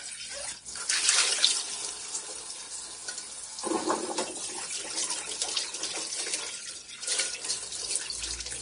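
Throughout, the audio has a hissy, grainy texture, with tones that sound roughened, attacks that are softened and blurred, and nothing at all above about 10.6 kHz. This is Vorbis compression at a heavy setting, likely from a bitrate in the region of 34 kbps. To save bits, the encoder cut off the top of the spectrum and quantised the remaining treble so coarsely that its fine detail turned into noise of similar energy.

At 0.98 s and again at 3.01 s there is a brief click-like buzz, a tiny hard-edged stutter lasting about 12 ms. Each is a repeated buffer. Fresh audio failed to reach the output in time, so the device played its previous block once more, which fits a 512-sample buffer. The sudden joins on either side of the repeat make the click, and around 10 ms of real audio is lost at each point.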